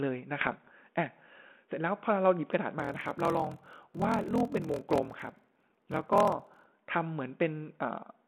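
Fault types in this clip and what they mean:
Bit errors on an ADPCM link: From about 0.40 to 0.71 s, sharp pops and short rough, crackly bursts break into the sound, with the level briefly jumping and dipping. Bits were corrupted in transit on the ADPCM-coded telephone link, a few in every thousand. Because the decoder rebuilds each sample from a running prediction and an adaptive step size, one wrong bit derails both, so each error keeps ringing for several milliseconds before the decoder settles again.
Block size mismatch (padded): From about 2.77 to 6.68 s, a steady low buzz near 41.7 Hz runs under the sound, and the delivery drags, slowed to about 0.89 of normal speed while the pitch stays where it was. One stage hands over blocks shorter than the next stage expects, and the shortfall in each block is filled with silence. That fits 1024-sample blocks padded out to 1152, so a tiny gap recurs at the block rate, which is the buzz, and stretches the timing by the ratio of the two sizes.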